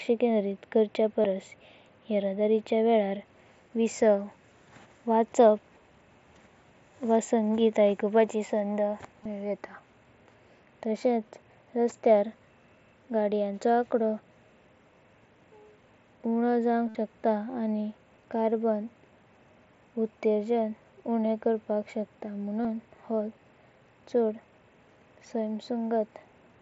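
Concealed Bluetooth headset packet loss at 1.22–1.24 s after "केंद्रित खर्चे", 9.24 s after "व संगीत आयकूनपाची संध", 16.89–16.95 s and 22.63 s: lost headset packets were patched by repeating recent waveform. The 60 ms run buzzes at full level before a slight warble.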